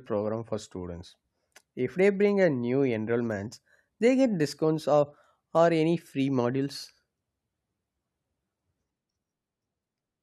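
From 1.96 s to 9.84 s, sample clock jitter adds a roughness that follows the speech. The converter's timing wanders by several microseconds, leaving error about 30 dB below the signal. Unlike steady background hiss, it vanishes in pauses.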